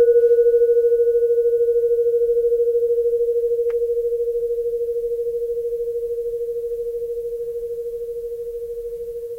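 No technical faults are audible anywhere in this recording of sounds.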